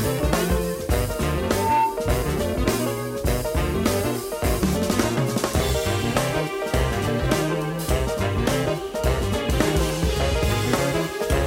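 Loudspeaker feedback squeal runs from 1.44 to 2.11 s: a microphone is picking up the loudspeaker it drives, and the loop gain tops one at 897 Hz. That single tone swells over about a third of a second into a squeal a few decibels above the surrounding audio.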